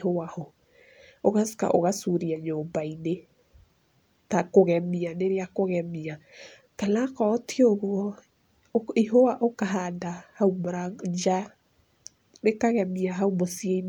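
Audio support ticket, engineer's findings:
No technical fault found in the speech signal; level, continuity and timing remain stable throughout.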